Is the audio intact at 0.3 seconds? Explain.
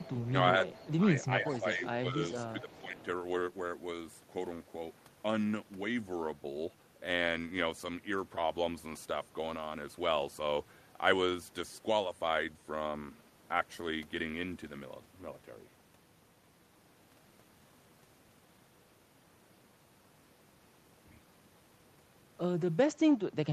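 No. Two faults meet at this point. An echo leak runs from the start to 0.3 s. The far side is likely playing the call through a loudspeaker, and its echo canceller let part of what its microphone picked up travel back down the line. The result is a faint, delayed copy of the speech, trailing the original by about 0.42 s and sitting roughly 20 dB below it.

Speech suppressed in double talk follows from 0.31 to 0.62 s. Both ends were talking together, and the echo canceller, likely unable to tell the local talker from loudspeaker echo, pulled the level down on both. Within that span the speech briefly dips, at most by about 5 dB and for only around 50 ms in total. It sounds like short, shallow ducks in loudness rather than full dropouts.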